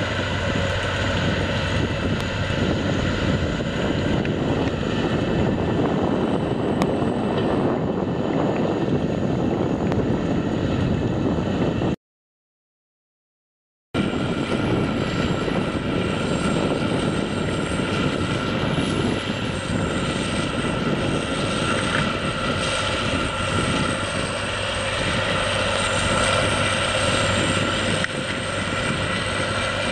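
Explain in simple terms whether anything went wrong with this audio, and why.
Four loud pops cut through the sound at 2.21, 6.82, 9.92 and 25.76 seconds. Each lasts about 20 milliseconds, and the one at 6.82 s is the strongest. The audio continues underneath. Each pop is likely a brief electrical jolt from a plug, switch or static.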